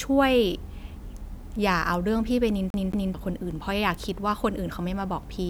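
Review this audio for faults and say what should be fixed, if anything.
CD stuck on one turn, from 2.70 to 3.14 s: a scratch knocks the laser back one track at the same point on each rotation, so the same 220 ms of speech plays twice in a quick, even stutter, with a brief mute at each jump. To prevent it, rip or play from a clean, undamaged disc, or use secure ripping that re-reads and verifies the track.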